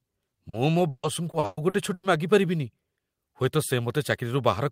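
Repeated packet loss (robotic sound) runs through this speech clip from 0.49 to 2.05 s. Over that stretch the stream drops out seven times, the longest gap lasting 140 ms, and each hole is papered over by stretching the last received sound, about 500 ms of fill in all, roughly a third of the span. The quick succession of patched holes makes the voice choppy, with pieces missing.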